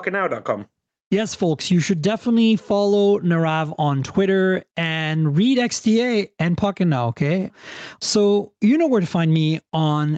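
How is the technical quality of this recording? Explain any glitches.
The recording suffers from gain pumping across the whole speech clip. Through the call's microphone processing, which limits the band to nothing above 8 kHz, the gain swings by around 15 dB. The likely cause is input gain set far too high, so a fast limiter or compressor clamps down on each loud syllable and releases in the gaps. Loud and quiet passages sit unnaturally close in level, giving a squashed, breathing quality. Unlike a noise gate, which would cut the pauses towards silence, gain pumping lifts quiet parts rather than removing them.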